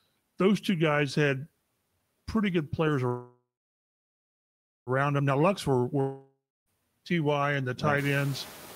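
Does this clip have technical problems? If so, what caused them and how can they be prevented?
Yes. Noise suppressor artifacts run throughout: background noise dips between phrases and swells under the speech, as bands judged steady noise are cut by about 17 dB. Prevent this by using a gentler suppression setting or recording in a quieter space.

A call audio freeze from 3.07 to 4.90 s sounds like a fading buzz that becomes about 1.4 s of silence before the speech resumes unbroken. Packets were likely delayed until the jitter buffer emptied, inserting roughly 1.8 s of delay with nothing lost. A more stable connection, such as wired rather than congested Wi-Fi, prevents this.

A long network dropout from 6.01 to 6.69 s likewise fades into about 0.26 s of silence, but the speech returns with roughly 0.66 s missing, likely because no audio arrived and that stretch was discarded. This is also prevented by a more reliable network path.

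The rise in room noise around 8 s comes from the recording environment, not the system.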